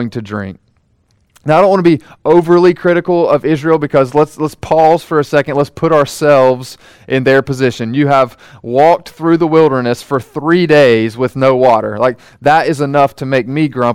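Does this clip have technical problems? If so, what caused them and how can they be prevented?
Yes. Hard clipping runs throughout. Peaks go about 4 dB past the limit, so a small share of samples are cut flat, adding crackle on loud syllables. Lower the input gain so peaks stay safely below full scale.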